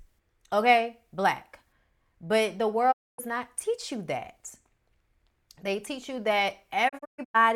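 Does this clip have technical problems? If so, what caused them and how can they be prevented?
Yes, there's a digital broadcast dropout, twice. From 2.91 to 3.20 s the speech fades out and goes silent, returning at "not teach you". After "teach you that", from 6.88 to 7.36 s, it breaks into several short holes, the longest 128 ms. Each time, the receiver couldn't decode good frames and muted until clean ones arrived, so that audio is gone. A stronger signal, a better antenna, or stronger error protection on the transmission would prevent it.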